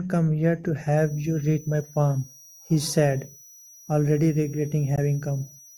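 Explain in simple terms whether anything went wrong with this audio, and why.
A switching power supply is whining at a frequency people can hear. This is a switching supply whistle, a thin high tone near 5.7 to 5.9 kHz, from 0.97 s to the end.

At 4.96 to 4.99 s the speech briefly cuts to silence, then carries on as if it had kept playing. This is likely a Bluetooth dropout, where wireless audio arrived too late and was skipped.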